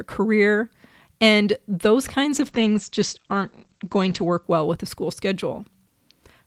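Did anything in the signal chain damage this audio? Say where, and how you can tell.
Yes. A call bitrate drop at the codec stage, driven by the network's bandwidth estimate, runs from 2.32 s to 4.49 s. The encoder was forced from 32 kbps down to 10 kbps and held near the bottom for about 1.96 s. At that rate it quantises the speech much more coarsely and narrows the coded band from 20 kHz to 8 kHz. The result is a muffled, rougher, watery sound until the bitrate climbs back.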